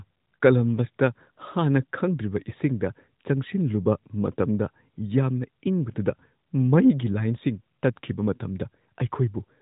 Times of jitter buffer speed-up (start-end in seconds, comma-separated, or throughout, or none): none